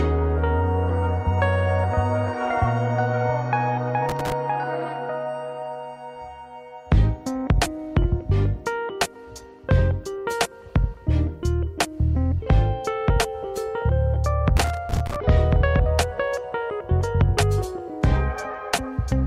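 Loose connector crackle appears from 4.09 to 4.32 s and again, longer, from 14.57 to 15.16 s. A worn or dirty contact is making and breaking as it shifts, chopping the sound into an irregular, scratchy burst of crackle for roughly a quarter second, then over half a second.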